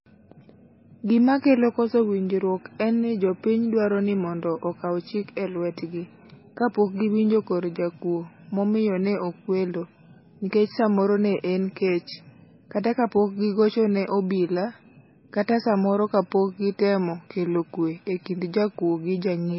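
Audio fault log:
throughout, likely MP3 compression: the speech has nothing above 5.6 kHz and sounds heavily watery and swirly, as a bit-starved encoder cuts the treble at a fixed frequency and zeroes weak frequency lines that flicker frame to frame, which fits a bitrate near 18 kbps.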